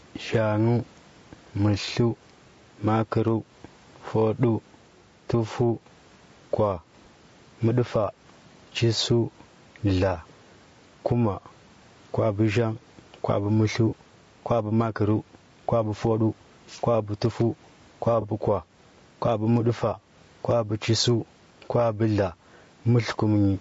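From the start and throughout the speech, the level breathes: it ducks by around 10 dB under each loud syllable. That is gain pumping, likely from input gain set too high with a fast limiter clamping it. Unlike a slow automatic gain drift, the ducking tracks every individual peak, and loud and soft passages sit squashed together.

Also continuous is a rough, grainy texture, with noise filling the gaps between voice harmonics. This is likely low-delay AAC compression (AAC-ELD) at a rate that points to around 32 kbps. Its short frames blur pitch structure, which distinguishes it from the swirly, watery artefacts of a long-frame codec. The band stops near 8 kHz from the call chain's normal limit, and room noise stays about 42 dB down.

At 1.85 to 1.88 s, 13.89 to 13.94 s, and 18.21 to 18.25 s, brief smeared, phasey patches interrupt the sound. These are AAC frame loss with concealment: each fits one missing frame of about 20 ms, refilled from the previous spectrum. 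Unlike a dropout, there is no silent gap, only a blurred splice.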